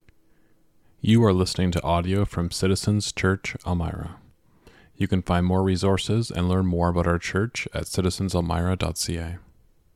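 No technical faults can be heard anywhere in the recording, and the signal path stays stable throughout.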